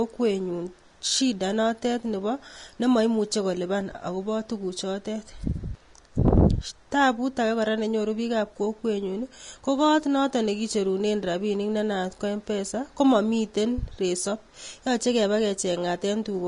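Speech carrying plainly audible damage throughout: the treble is hissy and grainy, consonant attacks are smeared, and nothing extends above 10.6 kHz. The likely cause is Vorbis compression at a low bitrate around 33 kbps. A spectrogram would show a hard ceiling at 10.6 kHz with speckled, noisy upper bands.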